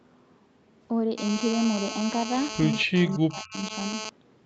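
A speech recording carries a GSM phone buzz from 1.18 to 4.09 s: a hard, raspy tone at 217 Hz, steady throughout and about 6 dB below the speech, left by a nearby handset on a call whose radio bursts the audio circuitry rectified. On a spectrogram it appears as evenly stacked horizontal lines at 217 Hz and its harmonics. Between 2.66 and 3.72 s the speech is suppressed in double talk, likely because an echo canceller turned it down while the far side was also talking. It is turned down over stretches totalling roughly 0.7 s, falling by as much as roughly 40 dB. The waveform shows the envelope dipping there.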